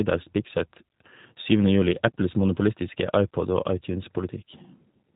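From start to end, the speech carries G.729 codec damage. The sound is rebuilt from a vocal tract model, pitch prediction and a few pulses per frame. Nothing passes above 3.8 kHz. The result is plainly rough and synthetic, which fits an 8 kbit/s stream.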